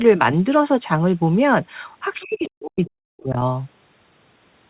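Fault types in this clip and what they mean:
Other side's voice leaking through: from 2.2 to 2.5 s a faint second voice, around 25 dB down, likely residual loudspeaker echo, shows as a weak separate harmonic trace.
Speech suppressed in double talk: between 2.22 and 3.37 s the speech drops by up to about 40 dB, likely from echo-canceller ducking. The waveform envelope collapses and the spectrogram turns patchy.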